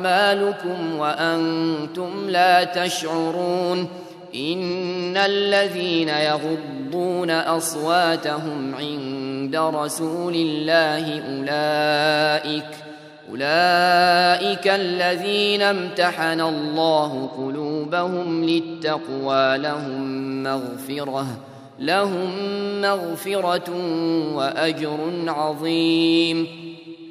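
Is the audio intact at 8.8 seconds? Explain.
Yes, at 8.8 s the audio is intact, with no dropout, click, distortion or other fault to be heard at that moment.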